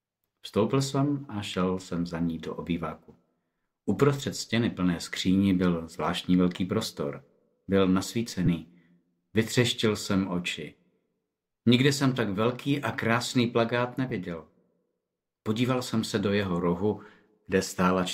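Lost LE Audio frames occur three times: at 2.05 s a gap of 7.5 ms, consistent with a single LC3 frame, and at 8.46 s and 14.10 s gaps of 15 ms each, which points to two consecutive frames. At each gap the decoder fills the hole by repeating the last received spectrum with randomised phase signs. Any tonal content briefly becomes a noisy smear, a short hiss-like blur in the sound rather than a clean dropout.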